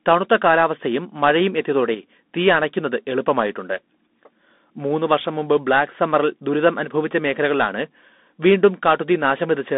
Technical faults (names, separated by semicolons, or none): Bluetooth CVSD headset codec